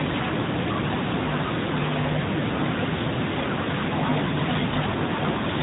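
Nothing here amounts to a technical fault.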